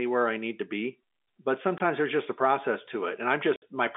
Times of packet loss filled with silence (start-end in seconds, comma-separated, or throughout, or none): 1.78-1.80, 3.56-3.62